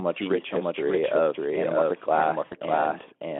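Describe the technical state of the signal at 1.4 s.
At 1.4 s, as throughout, a doubled audio track plays: an equally loud copy trails about 0.7 s behind, likely from a second capture path, stacking sharp, undecayed repeats visible as offset spectrogram patterns over the Speex telephone-band signal.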